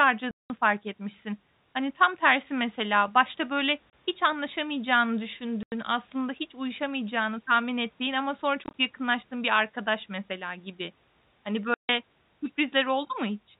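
Hard-edged dropouts cut into the speech at 0.31 to 0.50 s (190 ms), at 3.91 s (30 ms), at 5.63 to 5.72 s (90 ms), as scattered gaps of no more than 20 ms across 8.64 to 8.74 s, and at 11.74 to 11.89 s (150 ms). This is packet loss filled with silence: the receiver played nothing where packets never arrived. The gaps are all multiples of 10 ms, which fits 10 ms packets, and the sound cuts off abruptly at each edge instead of being smoothed. The G.711 telephone coding stops everything above 4 kHz.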